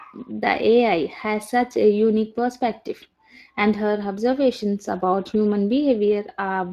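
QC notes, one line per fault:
throughout: Speex codec. The speech has a plainly audible coarse, hoarse graininess, typical of a CELP coder that rebuilds each short frame from a predicted spectral envelope plus a limited excitation signal, which smears fine harmonic detail into noise. The damage level fits a bitrate of roughly 22 kbps. On a spectrogram, harmonics look blurred and grainy, and nothing appears above 15.3 kHz. The waveform envelope looks ordinary, since the damage is spectral rather than in level.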